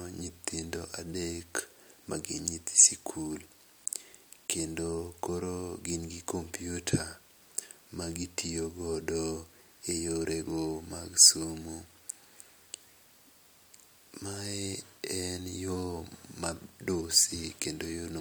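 No technical faults are audible anywhere in this recording.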